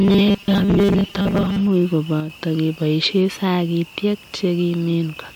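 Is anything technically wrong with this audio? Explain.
Yes, two problems are audible in this speech clip.

From 0.01 to 1.68 s there is robotic sound from repeated short buffers. The speech becomes a rigid, metallic buzz at 200 Hz, most likely because audio arrived too seldom and a 5 ms block was replayed over and over in place of most of the real signal. A spectrogram would show evenly spaced harmonics of 200 Hz locked flat across this stretch.

From 2.20 to 2.30 s, one channel drops out. The level suddenly falls by about 6 dB, which likely reflects one stereo side going silent before the mono sum. On a waveform this appears as an abrupt step down in amplitude lasting about a tenth of a second, with a sharp recovery at the end.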